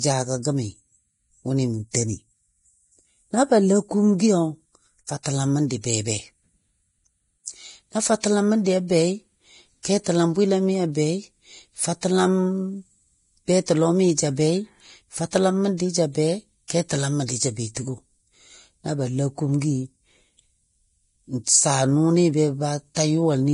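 Throughout, heavy lossy coding, likely Vorbis compression at around 29 kbps, removes everything above 10.6 kHz and quantises treble into hissy, grainy noise.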